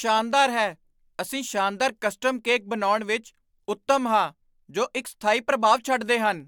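Across the whole of the recorded speech, no technical faults can be heard in the signal path.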